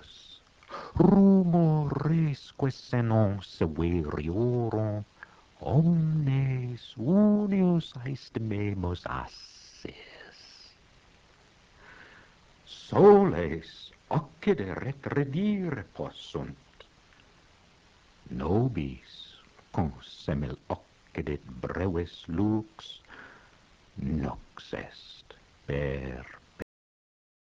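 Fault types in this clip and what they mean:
Cut-off end: the last buffers never got written, so the sound stops dead at 26.62 s and falls straight into digital silence with no decay.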